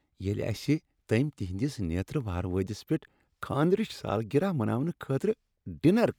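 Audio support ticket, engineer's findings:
No audible faults found in the speech. No action required.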